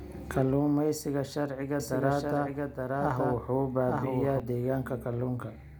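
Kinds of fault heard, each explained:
Doubled audio track: from 1.80 to 4.40 s a second full-band copy of the speech runs about a second behind, at roughly the same level. It starts and stops abruptly, with no decay or room colour, unlike an echo, and likely comes from a slower capture path.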